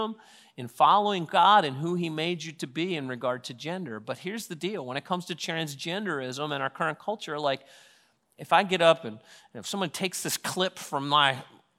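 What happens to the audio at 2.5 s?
Nothing goes wrong at 2.5 s; the speech continues intact through that point, with no dropout, click or distortion.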